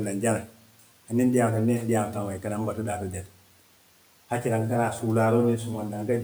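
From 0.43 to 0.56 s, speech was cut by the noise suppressor, which mistook speech for noise and lowered it by about 12 dB, leaving roughly a tenth of a second swallowed and faint above the room noise.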